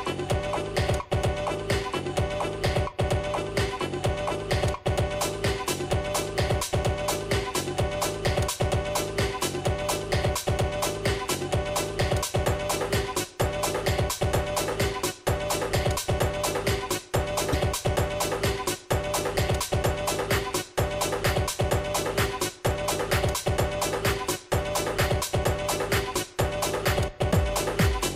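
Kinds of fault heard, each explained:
broken MP3 bit reservoir: a 30 ms glitch from 17.52 to 17.55 s, likely a frame after a cut decoding borrowed bytes from the wrong frame, about one 26 ms frame long.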